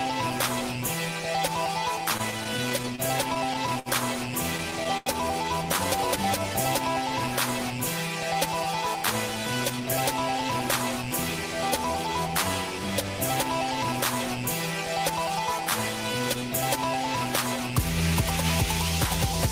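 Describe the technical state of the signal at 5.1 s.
Packets arrived late or slower than playback, so the jitter buffer ran dry four times between 4.58 and 5.09 s, with the stall ending right at 5.1 s. The receiver stretched the last sound across each wait, 125 ms in total and the longest 89 ms, roughly a quarter of that span, so nothing is lost but the audio drags in a stutter.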